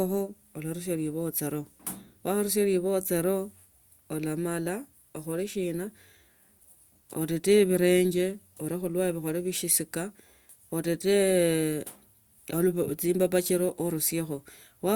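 Speech recording with no audible technical faults at any point.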